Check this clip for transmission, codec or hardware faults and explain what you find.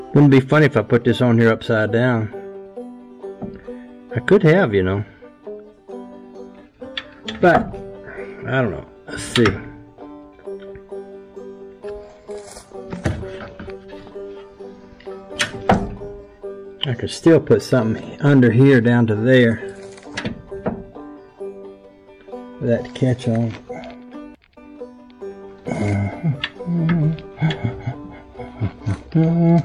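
One fault runs through the whole clip: hard clipping. The level reaching some stage sits about 6 dB above what that stage can pass, so the tallest peaks are sliced flat, though only a small fraction of samples, under one percent, are affected. Those squared-off tops create high harmonics, heard as brief crackle on the loudest moments. Unlike soft saturation or a limiter, which round or duck peaks smoothly, the edges here are abrupt and gritty.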